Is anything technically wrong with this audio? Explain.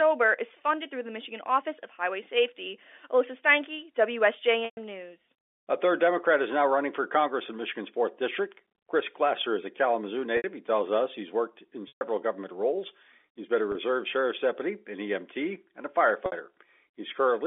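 Yes. Packet loss with pitch repetition occurs five times: at 4.65 s for 120 ms, and at 10.37 s for 70 ms. At 11.88 s, between "us he's worked in" and "government roles", there is a 130 ms loss. At 13.72 s, between "been a" and "sheriff's deputy", there is a 30 ms loss. At 16.26 s, after "and a", there is a 60 ms loss. Lost packets are bridged by repeating the last pitch period, fading out over about 50 ms. The 30 ms gap sounds like a brief held, buzzy tone. The longer gaps fade towards silence before speech cross-fades back. The audio passes through G.711 telephone coding, limited to roughly 300 Hz to 3.5 kHz.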